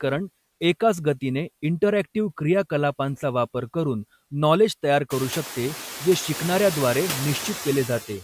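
Noise suppressor artifacts run throughout the speech. Steady background is cut by about 13 dB between words and swells back under them, so the spectrogram's noise floor darkens in gaps and brightens beneath speech, most visibly after the room noise rises around 5 s.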